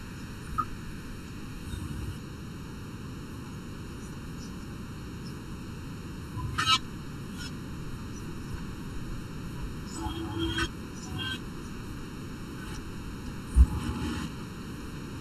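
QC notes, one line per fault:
Throughout: channel delay (comb filtering). One channel runs a little under a millisecond behind the other, and the two are summed to mono. Wherever the delayed copy lands out of phase with the original, energy common to both cancels, giving evenly spaced notches starting around 700 Hz and repeating up the spectrum at roughly twice that spacing. Because the delay never changes, the notches stay fixed, and the speech sounds hollow and phasey throughout.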